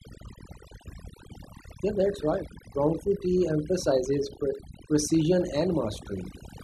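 A speech recording with overdone noise removal running throughout. The background between phrases collapses to near silence scattered with brief twinkling specks, because the noise reduction pulls individual frequency bands down or out whenever they sit close to its noise estimate, taking quiet parts of the speech along with the noise. Unlike low-bitrate codec artefacts, the damage tracks the level of each band against the noise floor rather than appearing as smearing or pre-echo around transients.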